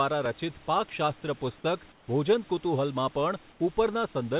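At 1.92 s the room background drops out for 160 ms, until 2.08 s. A flat, featureless hiss takes its place, about 4 dB quieter. At 3.52 s the same thing happens for 80 ms, about 3 dB quieter. This is comfort noise in place of the background, likely from discontinuous transmission. The sender paused its audio in these quiet gaps. The receiver filled them with synthetic noise shaped like the room.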